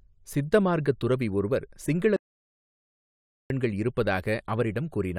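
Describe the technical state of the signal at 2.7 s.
At 2.7 s the signal is in an audio dropout to silence that runs from 2.16 s to 3.50 s, about 1.34 s of speech lost. The input was likely cut off, by a lost connection or mute, while the recorder kept writing silence. Unlike a noise gate or a quiet pause, the gap holds no room tone or noise floor at all, and the speech stops and resumes abruptly mid-flow rather than fading.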